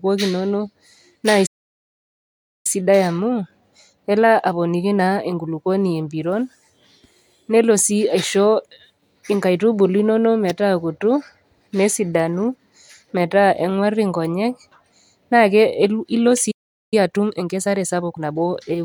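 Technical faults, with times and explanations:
1.46–2.67 s, playback stall: the speech stops dead mid-flow for about 1.2 s, then resumes. The likely cause is the player running out of buffered data or its thread being blocked. The waveform shows a flat, empty gap, and the spectrogram shows a blank vertical band.
2.67–5.67 s, time-compressed catch-up: after the stall the speech runs about 1.1 times fast at normal pitch. Small pieces are cut out and cross-faded to shrink the backlog. On the spectrogram, harmonics stay at the same height while syllables sit closer together.
16.51–16.94 s, playback stall: the audio cuts to silence for about 0.41 s mid-flow, then continues. The likely cause is again a buffer underrun or a blocked output thread. The waveform drops to a flat line, and the spectrogram shows an empty strip across all frequencies.
16.94–18.56 s, time-compressed catch-up: the speech is hurried to about 1.25 times speed without a pitch change. 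The spectrogram shows compressed syllable spacing with unchanged pitch contours and occasional smeared joins at the splices.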